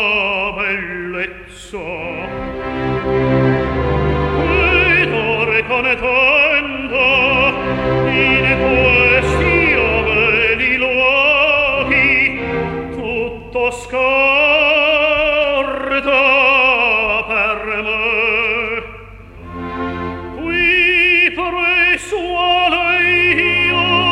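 No technical faults can be heard anywhere in the recording; the signal holds steady with nothing in it that points to a problem in capture, processing or transmission.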